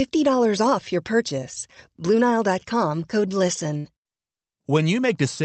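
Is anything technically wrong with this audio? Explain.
Yes, there is a burst of packet loss at 3.77 to 3.85 s. Around 70 ms of the stream never arrived in time, so the receiver stretched the last sound it had over that gap and turned it down as it went. The result is a short held sound that fades, then the audio resumes slightly further on with that stretch missing. On a spectrogram, the spectrum runs flat and smears horizontally while dimming, then the pattern jumps to new content. In the waveform, a repeating, shrinking envelope ends in an abrupt change. The call codec's band limit is also visible, with energy stopping near 8 kHz, which fits Opus.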